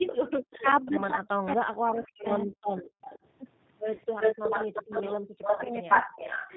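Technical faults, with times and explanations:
Throughout: G.729 codec. The speech is squeezed into 8 kbit/s and rebuilt from a vocal tract filter, a pitch predictor and a few pulses per frame. Nothing above 4 kHz survives. The result is plainly rough and synthetic, though still intelligible.
0.07 to 0.73 s, 2.77 to 3.19 s, 4.19 to 6.52 s: echo leak. A delayed copy of the speech comes back, 231 ms late in the first two stretches and 349 ms late in the last. It sits about 10 dB down, then about 20 dB down, then about as loud as the speech itself. This is likely a loudspeaker echo that the far end's canceller failed to remove.
0.6 to 2.58 s, 5.17 to 6.06 s: speech suppressed in double talk. The talker's speech dips and breaks up while the echo overlaps it. It drops as much as about 40 dB, for roughly one and a half seconds in the first span and under half a second in the second. The likely cause is a canceller that could not tell its own talker from the echo and turned both down.
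2.02 s, 3.95 s, 5.56 s: VoIP packet loss concealed by the speech codec. One 30 ms packet goes missing each time. The decoder extends the last pitch and filter into a brief buzzy tone or coloured noise that fades. The speech stays weak for a moment after the packet stream resumes, because each frame builds on the one before.
2.89 to 3.03 s: background gated by the echo canceller. The room sound drops out by as much as about 40 dB for roughly 150 ms while the echo plays. It returns once the canceller releases the microphone.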